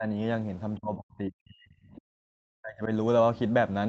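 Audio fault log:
0.00–0.05 s, speech suppressed in double talk: The opening dips briefly, by roughly 15 dB. The likely cause is an echo canceller turning down speech while both sides talked.
0.78–2.89 s, speech suppressed in double talk: For about two seconds the speech sinks deeply, at worst roughly 40 dB. This likely comes from the same echo canceller muting it during overlap.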